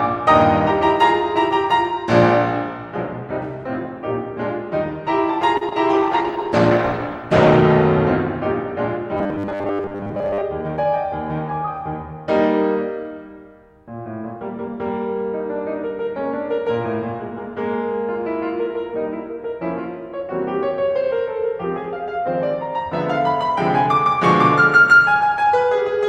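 At 5.57 s the music hangs briefly in a short stall from a late packet. A packet arrived late, the jitter buffer ran dry, and the last sound was stretched for about 37 ms. Playback then resumed where it stopped. Nothing is lost, but the held sound carries a slight buzz or dip.

At 5.69 s comes a short concealed packet loss. About 20 ms of audio never arrived in time. The receiver papered over it by extending the preceding sound, then blended back. It is heard as a quick smear or wobble in the music.

From 5.91 s to 7.70 s there is a call bitrate drop. The encoder was pushed from 64 kbps down to 14 kbps, staying at the bottom for about 1.7 s. Coding turns coarse and the highs are trimmed. The music sounds rough and muffled until the rate recovers.

Between 9.17 s and 10.42 s the music goes robotic, from repeated short buffers. The same tiny slice of audio plays over and over, most of the time, while fresh audio is skipped. 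That repetition imposes a rigid 100 Hz buzz, which fits a 10 ms buffer. Likely cause: new audio arriving too rarely.

From 10.61 s to 10.85 s a jitter buffer speed-up follows. The buffer held too much audio, so the receiver cut small pitch-period pieces, about 50 ms in all. The music runs at roughly 117% speed without a pitch change. The tempo briefly lurches forward.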